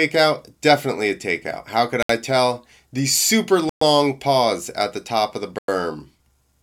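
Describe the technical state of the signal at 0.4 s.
The audio is intact at 0.4 s, with no fault audible at that moment.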